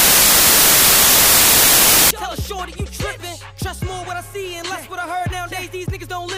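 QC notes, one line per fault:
0.00–2.11 s, samples built from the wrong bytes: the opening stretch arrives as a wall of loud, hiss-like broadband noise instead of the intended audio. Each sample has been assembled from misaligned or swapped bytes, so the rapidly fluctuating low-order bits land in the most significant positions and dominate every value. The result is close to white noise on the louder sounds.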